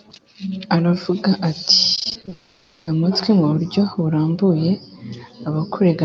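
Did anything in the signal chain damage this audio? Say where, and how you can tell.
Yes. The network stage shows repeated packet loss (robotic sound) from 1.95 to 2.33 s. Eight short gaps of up to 20 ms each are patched by repeating the previous sound, giving choppy speech with pieces missing.

From 2.33 to 2.89 s, about half a second of speech is replaced by a smeared, buzzy continuation that never drops to silence. This is likely a long network dropout, with the receiver stretching the last audio across the hole.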